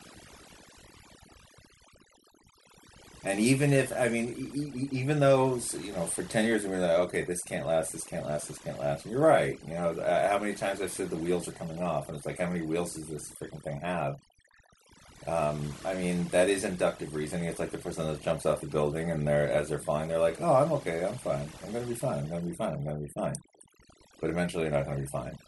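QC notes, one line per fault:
throughout: overdone noise removal. The noise reduction stage was set too aggressively, gating individual frequency bands to near zero wherever they approach the noise estimate. Background collapses to near silence with twinkling artefacts, and quieter speech components are removed too.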